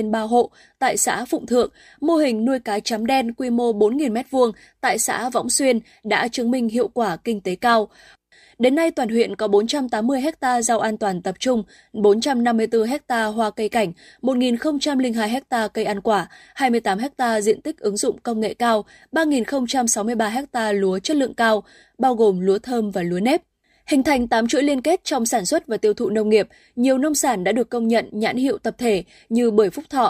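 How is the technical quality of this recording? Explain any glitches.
Good news: there aren't any glitches to explain here, since nothing in this speech recording stands out as a technical problem.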